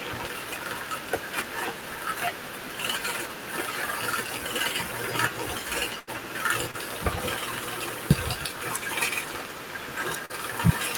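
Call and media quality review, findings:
Burst of packet loss, 5.99 to 6.09 s: held buzz or fading hiss, then speech jumps ahead with 80 ms gone. Jitter buffer/decoder concealment extends last frame, decaying. Spectrogram: smeared static harmonics fading, then abrupt resumption.

Short concealed packet loss, 6.71 to 6.75 s: brief smear or wobble, 20 ms missing. Decoder PLC synthesises from last pitch or shaped noise, cross-fades back. Spectrogram: blurred sliver.

Short concealed packet loss, 10.25 to 10.32 s: wobble, 40 ms missing, a consonant may drop. Same PLC mechanism. Spectrogram: smeared fill replacing transient detail.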